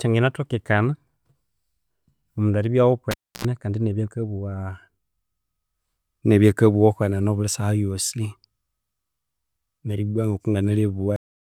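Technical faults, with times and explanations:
3.11–3.45 s, cable pulled and plugged in: a pop as the live lead comes out, then about 0.29 s of near silence. On reinsertion the tip alone touches for 72.5 ms, passing 60 Hz mains buzz, before a second pop brings the sound back.
11.16 s, cut-off end: the speech stops in the middle of a sound and drops straight to digital silence with no natural decay. The final buffers were never written out, so the rest of the file stays empty.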